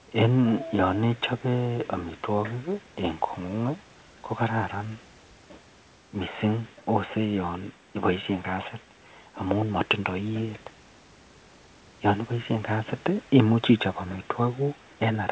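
No faults: room noise sits about 35 dB below the speech, and the call path leaves nothing above 8 kHz, consistent with G.722 coding.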